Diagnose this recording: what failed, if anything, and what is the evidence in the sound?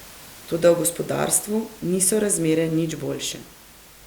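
Nothing in the chain has failed: the only thing beneath the speech is room noise about 23 dB down, which belongs to the recording space rather than to any stage of the system.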